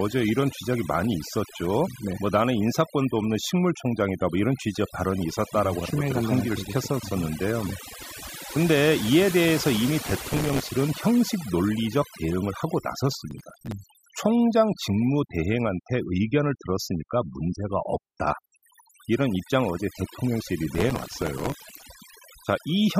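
A speech recording with overdone noise removal throughout: the background drops to near silence dotted with twinkling specks, and quieter parts of the voice are switched off with the noise. Unlike a simple low-pass or band-limited sound, the loss flickers band by band. Processor overload crackle tears through the speech from 10.06 to 10.69 s, 13.31 to 13.72 s and 20.75 to 21.83 s. Each burst is a run of tiny hard-edged repeats of old audio, which fits very short buffers of around a millisecond and a half being missed one after another. That repeating grit sets it apart from single clicks or dropouts.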